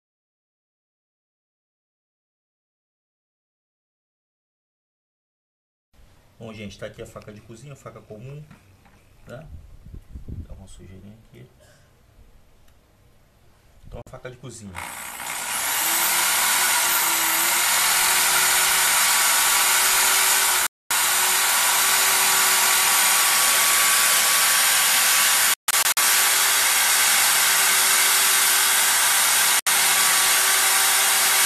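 Digital broadcast dropout occurs four times: the receiver stopped getting valid frames and muted until clean ones returned, so the sound cuts to silence and resumes later in the programme, with the missing audio lost. At 14.02 s a 48 ms hole fits about two lost frames; at 20.67 s the gap lasts 240 ms; from 25.54 to 25.98 s 240 ms vanishes in scattered short holes, the longest 144 ms; at 29.59 s a 72 ms gap follows.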